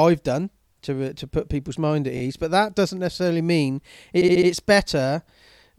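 Repeated frames interrupt this speech at 2.16 to 2.21 s, where a 23 ms block, about one compressed frame, plays twice more, and at 4.21 to 4.48 s, where a 70 ms block, likely three frames, repeats four times. The decoder replays the same audio, causing audible stutters and adding about 46 ms and 279 ms of length.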